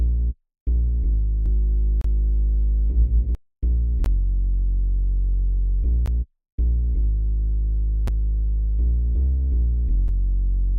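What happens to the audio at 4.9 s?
Nothing goes wrong at 4.9 s; the audio plays through that moment intact, with no dropout, glitch or other fault.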